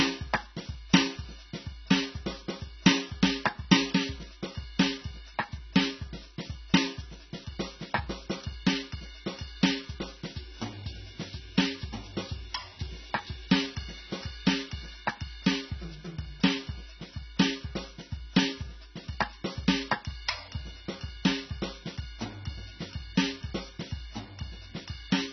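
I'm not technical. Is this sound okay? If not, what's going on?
No, two things are going on, and both last the whole way through the music. First, there's a USB whine: a faint, steady 1 kHz tone underneath. It's electrical noise from a USB connection leaking into the audio through the power or ground wiring.

Second, the music sounds dull and muffled, with nothing above about 6 kHz, plus a warbly, fizzy edge on held sounds. That's heavy AAC compression damage, likely from the file being squeezed far too small to save space.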